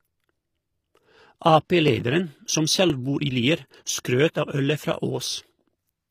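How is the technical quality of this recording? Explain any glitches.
The speech carries plainly audible codec damage throughout. Likely HE-AAC compression: rebuilt treble ending at 15.5 kHz, with harmonics misaligned above the crossover, unlike plain AAC's duller low-bitrate cut-off; this fits roughly 24 kbps.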